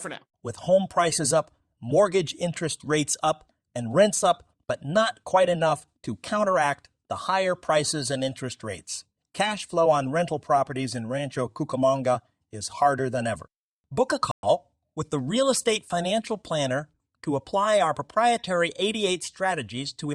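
Speech with a stream reconnect at 14.31–14.44 s: after "than ever book a" the audio drops out for 117 ms, then resumes about a tenth of a second later at "with the".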